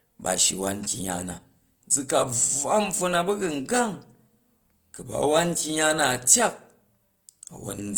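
A lossy encoder running short of bits is the likely cause, and the damage fits Opus compression in its music-oriented CELT mode at a low rate, around 24 kbps. Lacking bits for fine detail, it fills bands with folded or noise-like content. Throughout the speech, the tone sounds grainy, rough and noisy rather than swirling, while the bandwidth stays full, reaching to about 20.1 kHz, so the degradation is plainly audible without muffling.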